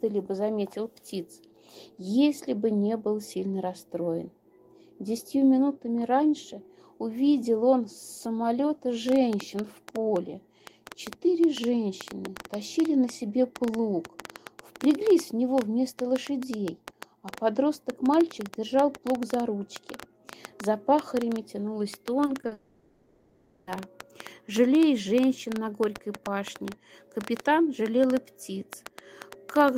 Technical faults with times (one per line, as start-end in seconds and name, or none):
9.09-29.77 train of clicks
22.25-22.53 short concealed packet loss
22.53-23.69 long network dropout